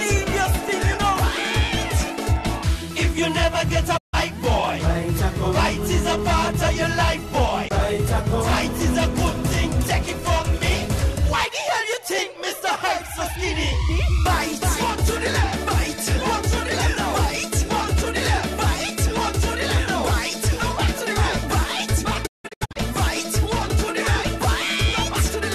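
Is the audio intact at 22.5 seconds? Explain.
No. A digital broadcast dropout runs from 22.25 to 22.77 s. The receiver muted on bad frames, leaving short 20 ms-faded holes totalling 336 ms. The longest lasts 168 ms.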